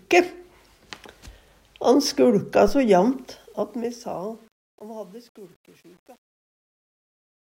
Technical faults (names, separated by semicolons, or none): truncation distortion on a fade